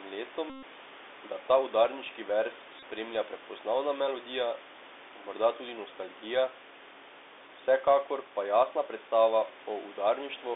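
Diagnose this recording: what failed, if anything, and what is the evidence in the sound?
The speech passed through a Bluetooth CVSD headset codec, the narrowband one-bit delta modulation used on headset voice links. Each sample only steps up or down, with an adapting step, which fits 64 kHz one-bit coding. The sound is confined to roughly 300 Hz to 3.6 kHz, giving a thin, boxy tone. The damage is plainly audible: sibilants turn scratchy, loud bright moments slur where the step cannot keep up, and a granular hiss sits under the speech, with the room noise about 17 dB down.

Two stretches show the Bluetooth headset packet repeated fault, a radio-link problem. Packets between headset and phone were lost, and the chip re-decoded the last good packet's bits in their place. From 0.50 to 0.64 s, about 128 ms, the repetition every 3.75 ms produces a steady buzz near 267 Hz. A shorter burst from 2.79 to 2.83 s, about 30 ms, is a brief buzz of the same pitch before normal decoding resumes.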